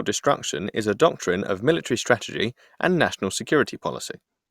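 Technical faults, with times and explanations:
No technical faults can be heard in this speech recording. Nothing in the audio points to a problem at any point in the clip.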